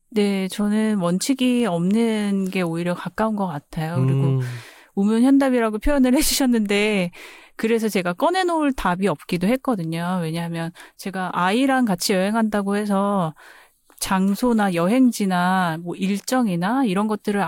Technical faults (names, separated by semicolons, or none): sudden gain jump